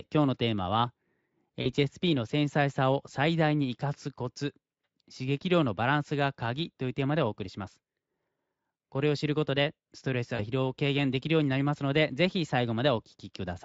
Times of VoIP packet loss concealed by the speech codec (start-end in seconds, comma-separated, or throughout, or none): 1.61-1.67, 10.35-10.44